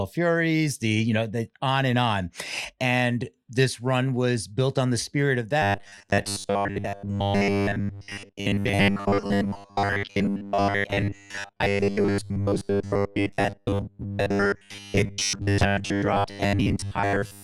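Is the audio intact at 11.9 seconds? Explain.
No. From 5.62 s, just after "on the spirit of", to the end, the speech is a rigid metallic buzz at 100 Hz: robotic sound from repeated short buffers, likely from replaying 10 ms chunks in place of most of the missing audio.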